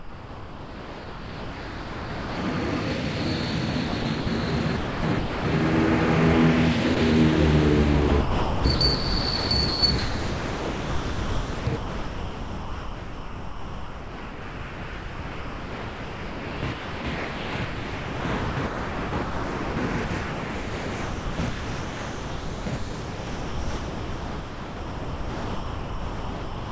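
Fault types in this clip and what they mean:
Sound dropped by the voice detector: The first 2.4 s are replaced by steady synthetic hiss, and a 20 ms gap at 6.95 s does the same. The sender's voice detector likely took the sound for background and stopped sending, so comfort noise filled in.
Sound chopped by the voice detector: From 3.89 s the sound keeps breaking up. This is heaviest from 8.09 to 19.77 s and from 20.05 s to the end. The detector likely kept switching transmission, swapping quieter parts for comfort noise.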